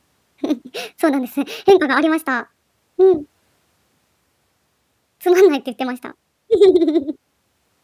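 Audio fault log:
throughout, wrong sample rate: the speech runs 1.45 times too fast and sits 6.45 semitones high, so it sounds squeaky and rushed. Speed and pitch move together, which fits audio recorded at 22 kHz being played at 32 kHz with no conversion.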